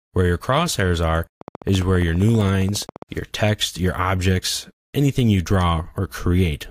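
A train of clicks runs from 1.41 to 3.03 s: about thirty near-identical pulses at a regular 14.9 per second, roughly as loud as the sound itself, heard as steady ticking. The likely cause is interference from nearby equipment or a faulty connection or power supply.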